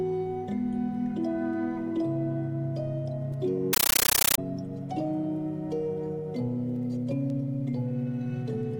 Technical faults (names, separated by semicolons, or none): compressed stream played as audio